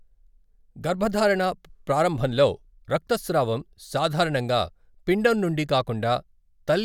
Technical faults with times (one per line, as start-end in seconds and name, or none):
none